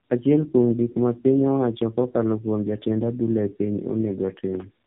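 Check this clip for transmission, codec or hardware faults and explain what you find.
One fault runs through the whole clip: tandem speech coding. The call passed through two low-rate speech codecs in a row, consistent with a G.729A-style coder followed by AMR-NB at around 8 kbit/s, with a plain telephone link between. Each border means decoding and coding again. The second coder models sound the first has already damaged, so their errors pile up. Nothing is heard above 3.8 kHz. The speech sounds muffled, rough and warbly throughout.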